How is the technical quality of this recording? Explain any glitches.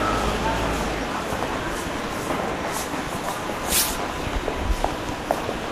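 No glitches or technical faults can be heard anywhere in the recording.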